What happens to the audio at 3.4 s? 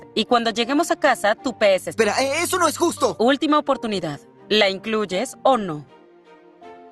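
It sounds hurried, 7% fast at unchanged pitch, from 2.07 to 4.32 s. This is a jitter buffer speed-up, snipping short pitch-period pieces to shed about 150 ms of backlog.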